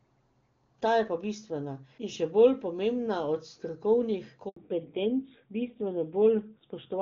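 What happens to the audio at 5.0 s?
The call falls back to narrowband from 4.56 s to the end. It switches from HD Voice to an older narrowband codec, so everything above 4 kHz disappears and the speech sounds duller and rougher.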